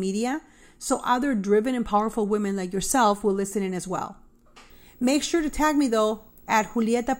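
At 4.7 s, right after "listen in as well", video or display buzz comes in and continues to the end of the clip at 7.2 s. A screen or video cable is coupling into the audio path, adding a buzz at the 59.94 Hz field rate with hash riding above it, plus a thin, very high line-rate tone near 15.7 kHz. The interference sits roughly 30 dB under the speech.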